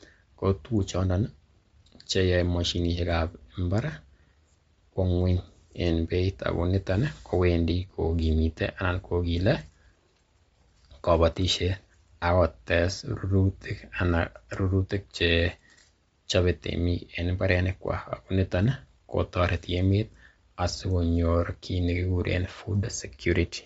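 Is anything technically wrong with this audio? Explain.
Yes. Throughout the speech, there is plainly audible Bluetooth LC3 compression damage. The likely cause is a low-bitrate transform codec, consistent with 32 kbps and 10 ms frames, noise-filling the upper band. The voice sounds breathy and grainy.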